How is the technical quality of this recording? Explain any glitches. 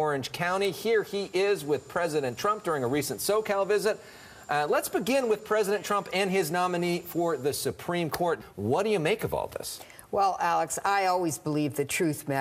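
The technical quality of this recording is good, with no glitches to explain.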